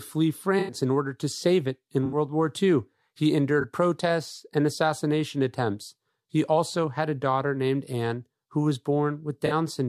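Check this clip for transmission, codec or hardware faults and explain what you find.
Four runs of corrupt frames concealed by the AAC decoder break up the speech at 0.59–0.74 s (just before "in order to save"), 2.05–2.16 s (after "to save it in"), 3.61–3.65 s (before "protests and assassination attempts") and 9.46–9.52 s. Bit errors damaged the coded frames, and the decoder detected them and substituted muted or scrambled spectra. The lengths, 0.16 s down to 0.04 s, fit runs of roughly four, three, one and two frames.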